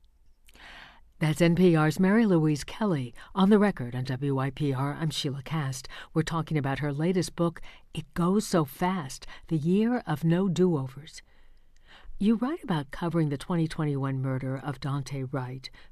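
No technical faults can be heard at any point in the recording.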